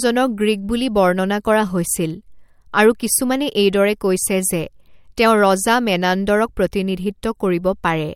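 No technical faults can be heard anywhere in the speech recording. There is nothing to place on a timeline and no event that calls for a closer look.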